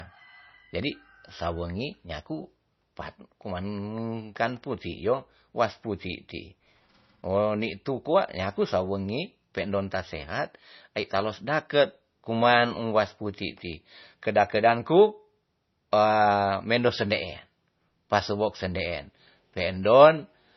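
From start to finish the speech sounds dull, with nothing above about 5.9 kHz, so sibilants lose their edge. This is likely low-bitrate audio saved at a high bitrate: an MP3 encoded very sparingly, around 24 kbit/s by the sound of it, then re-encoded as a much larger MP3 near 192 kbit/s. The second pass keeps the damage from the first and cannot restore the missing treble.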